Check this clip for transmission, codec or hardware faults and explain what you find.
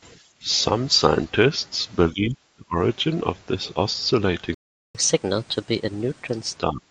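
Three kinds of fault are audible in this speech: repeated level drops from an echo canceller, one playback dropout, and a sped-up stretch after it.

Speech suppressed in double talk, at 0.42 to 0.47 s, 2.12 to 2.78 s and 6.7 to 6.9 s: the echo canceller likely mistook overlapping talk for echo and attenuated the speech. The first dip is shallow, about 5 dB. The other two cut deeper, about 30 dB and 25 dB.

Playback stall, 4.54 to 4.95 s: the player likely ran dry of data and output silence for 0.4 s. The speech halts mid-flow, then resumes.

Catch-up at higher speed, 4.95 to 6.56 s: the player resampled its backlog at 1.25 times normal speed to recover lost time. The speech sounds hurried and about four semitones high.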